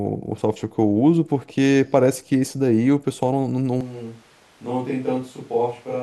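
At 3.81 s the speech suddenly turns roomy and hollow, losing bass and dropping roughly 10 dB, with background noise rising to around 30 dB below the voice until the end. This is likely a switch to a distant microphone after the close one failed.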